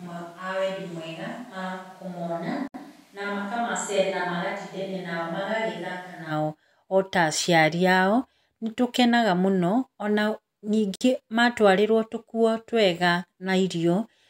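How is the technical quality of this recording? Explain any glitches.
The recording has two kinds of fault: a poor microphone for the first part, and two short dropouts.

From the start until 6.30 s, the speech sounds roomy and hollow, with thin bass. It is around 10 dB quieter, and room noise sits roughly 30 dB below the speech. This is likely a switch to a distant microphone, such as a camera's, instead of the close one. At 6.30 s the sound snaps back.

There is a gap at a join of encoded pieces at 2.68 to 2.74 s, lasting about 65 ms, and another at 10.96 to 11.01 s, lasting about 53 ms. The audio was encoded in sections and joined untrimmed. Encoder start delay and final-frame padding left silence behind. Each gap has smeared edges, and the speech then resumes where it stopped.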